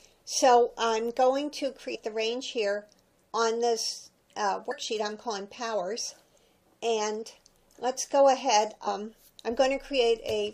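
Damaged data in a compressed stream produces brief blips at 1.94–1.96 s, 4.70 s and 8.86 s, where corrupted frames make the decoder lose sync and resynchronise.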